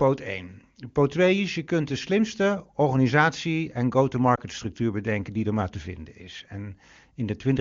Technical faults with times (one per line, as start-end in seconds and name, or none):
4.35-4.40 lost AMR speech frames